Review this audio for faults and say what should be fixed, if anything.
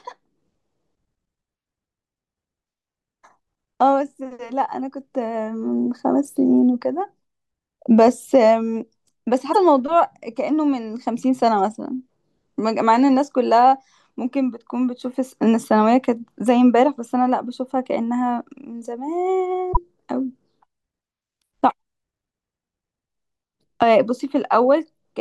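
Two brief glitches break into the speech, at 9.49 to 9.56 s and again at 19.69 to 19.77 s, each lasting well under a tenth of a second. They are damaged data in the compressed stream. Bytes in those stretches were lost, zeroed or overwritten, so the decoder misread the affected frames, lost sync and hunted for the next valid frame header, producing a brief glitch instead of the intended audio. Protect the file or stream with checksums and error-checked transfer, and re-fetch or re-encode from an intact source.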